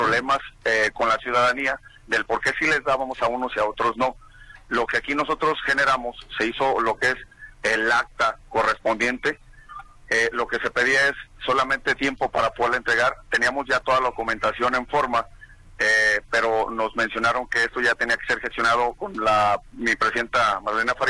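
Throughout, a resampler restarted on every 100 ms block leaves edge errors, heard as steady 10 Hz ticks. Unlike dropouts, they vanish in silence. This fits 48 kHz to 24 kHz conversion.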